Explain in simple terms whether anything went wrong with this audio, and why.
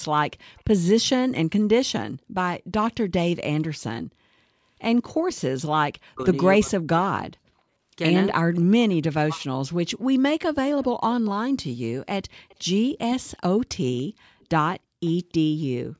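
A couple of things went wrong here, both typical of a call on speakerphone.

First, there's an echo leak: a faint copy of the talker comes back about 0.29 s late, briefly at 0.57 to 0.63 s, then around 10.83 to 11.28 s and more steadily from 12.34 to 15.13 s. That's likely a loudspeaker echo the far end's canceller didn't fully remove.

Second, speech gets suppressed in double talk from 6.04 to 7.08 s and 8.37 to 9.48 s. The voice dips sharply, almost vanishing in places, likely because both sides spoke at once and the echo canceller turned everything down.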